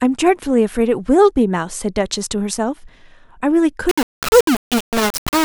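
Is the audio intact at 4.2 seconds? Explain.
No. From 3.89 s right through to the end, the speech sounds like it's been squeezed down to very low bit depth without dither, likely only about 3 bits, rounded to the nearest step. With so few levels, the rounding error tracks the speech itself, so it comes out as a grainy, gritty distortion that shifts with every syllable. The error sits only about 10 dB or so below the speech, and the quieter bits break up or sputter between steps.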